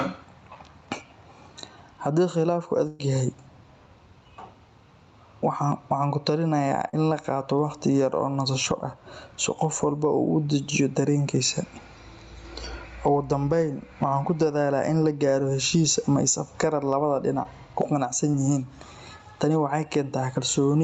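Throughout the 21 seconds there is gain pumping. The gain swings by about 15 dB, so loud and soft passages sit squashed together. The likely cause is input gain set far too high, with a fast limiter clamping every peak. Unlike a dropout, this is a continuous breathing movement rather than a break.

From 2.87 to 3.01 s comes a burst of packet loss. About 120 ms of audio never arrived. The receiver stretched the last sound across the hole, turning it down as it went, then jumped ahead with that stretch missing. It is longer than the brief glitches that follow.

Short concealed packet loss then appears at 6.89 to 6.95 s, just before "in la", with about 40 ms lost. It recurs at 17.43 and 18.31 s, each about 20 ms. The decoder continued the previous sound and blended back, leaving only a quick smear or wobble rather than an audible gap. The speech is band-limited to 8 kHz by the Opus call path.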